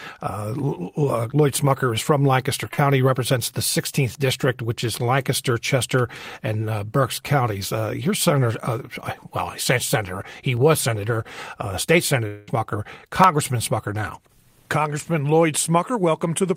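At 2.73 s there is a short concealed packet loss lasting about 0.06 s, with roughly 40 ms of the speech missing. The receiver covered the gap by extending the preceding sound for about 39 ms and then blending back into the real signal. It is heard as a brief smear or wobble in the voice. On a spectrogram the harmonics go flat and slightly blurred for that sliver instead of following the natural movement of the speech.

At 10.57 s, just before "was senator uh state", a single sharp click appears. This is most likely dropped samples: well under a millisecond of waveform is missing, so the trace jumps straight from one value to a later one. Nothing audible is lost. The jump shows as a vertical step in the waveform and a thin full-height line on the spectrogram.

From 12.27 to 12.49 s, just after "was senator uh state", about 0.2 s of audio never arrived, most likely a long network dropout. 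The receiver filled nearly all of it, about 202 ms, by stretching the last sound into a fading buzzy continuation rather than leaving silence. When the real signal resumes, the missing stretch is simply absent. A spectrogram shows a smeared, decaying band of frozen harmonics where the speech should continue.

At 13.24 s another isolated click occurs, again most likely dropped samples of under a millisecond. It has the same waveform step and the same thin vertical spectral line.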